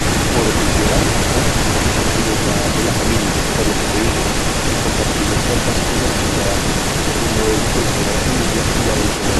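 Throughout the clip, from 0.0 s to 9.4 s, there is an echo leak, most likely a far end on loudspeaker whose echo canceller let its microphone pickup pass back. A copy of the speech trails 290 ms behind, only slightly quieter than the original.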